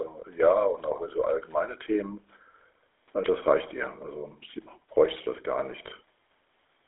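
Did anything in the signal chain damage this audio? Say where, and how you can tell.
Yes, the codec stage. The whole clip carries the buzzy, gravelly roughness of the GSM full-rate codec, and it's plainly audible from start to finish. The band sits at roughly 300 Hz to 3.6 kHz, so there's no air on top and thin lows. The grit comes from the codec rebuilding the voice through a vocal-tract model fed by a sparse, regularly spaced pulse excitation. That's the sound you'd expect from a 13 kbps full-rate call leg.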